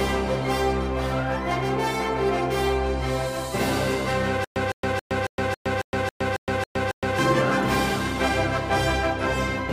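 From 4.44 s to 7.19 s you get a stutter with silent gaps: the same 158 ms burst of sound comes back ten times, each followed by about 116 ms of dead digital silence, so it ticks along at a steady 274 ms cycle. It's most likely the player or stream stalling, replaying its last fragment on each retry and then running dry. Whatever audio belonged in that stretch never plays.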